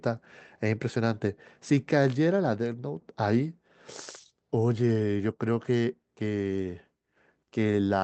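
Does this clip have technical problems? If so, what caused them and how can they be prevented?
No, nothing here counts as a technical problem: the speech went through an ordinary WebRTC call path with the Opus codec, whose top end stops around 8 kHz as expected for that setting, so there is nothing to prevent.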